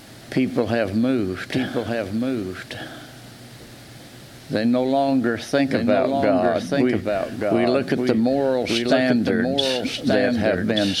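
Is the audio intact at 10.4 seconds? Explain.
No. A doubled audio track runs throughout, including 10.4 s. A second copy trails about a second behind, a few decibels quieter, likely from a slower capture path.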